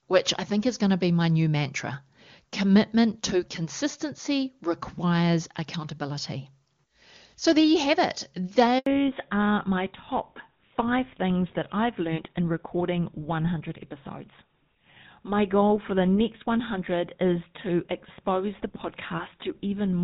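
A handover gap opens at 8.78 s and lasts until 8.86 s, about 80 ms of silence in the speech. The call was being passed from one network link to another, and no speech frames reached the receiver during the switch. The voice fades out within a few tens of milliseconds and the line stays dead until the new link carries audio again. Whatever was said in that stretch is gone.

A fallback to narrowband follows at 8.86 s, as soon as the new link comes up, and lasts to the end. Before the gap, the HD Voice path keeps the speech full and clear with little or no coding damage, which fits AMR-WB at 23.85 kbit/s. After the switch, the call is carried by an older narrowband codec, which fits GSM full rate at 13 kbit/s. Nothing above 4 kHz survives, so the voice loses its crisp upper detail and sounds duller and rougher.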